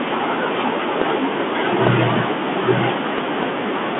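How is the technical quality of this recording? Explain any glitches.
Poor: the recording carries codec damage throughout and three separate pop events.

Bluetooth CVSD headset codec, throughout: the sound is squeezed into a telephone band of roughly 200 Hz to 3.5 kHz, with nothing above 3.8 kHz. The one-bit, adaptive-step coding, which fits a 64 kbps link, plainly fails to keep pace with loud high content, so s sounds come out scratchy over a granular hiss.

Loud pops, at 1.02–1.04 s, 1.87–1.89 s and 3.18–3.45 s: each is a sharp click about 10 dB above the speech, with the 1.87 s one nearer 15 dB. The last event holds two pops in quick succession. A brief voltage spike, likely from a switch, static or a driver glitch, lands on the signal while the speech carries on underneath.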